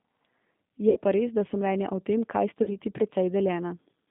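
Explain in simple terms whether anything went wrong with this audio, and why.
Two things went wrong here. First, the whole recording has been through a G.729 codec, the kind of heavy compression used on cheap phone and internet calls. It rebuilds speech from a rough model of the voice instead of keeping the actual sound, so everything comes out a bit rough and synthetic. It also confines the sound to a narrow phone-line band of roughly 150 Hz to 3.7 kHz, which is why it sounds thin and muffled.

Second, there's VoIP packet loss concealed by the speech codec, happening twice. From about 0.90 to 0.99 s, right before "pa res da so", around 60 ms of audio went missing, which fits three lost packets. From about 2.63 to 2.69 s, just after "mnenja o tem kaj", roughly 40 ms dropped out. Both times the decoder filled the hole by stretching the last bit of voice it had into a fading sound. That's why those moments sound smeared and weak for a beat.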